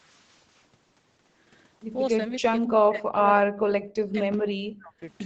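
Speech suppressed in double talk at 2.3 to 2.48 s and 2.65 to 5.04 s: the speech cuts out, sinking roughly 40 dB, likely because an echo canceller mistook overlapping talk for echo.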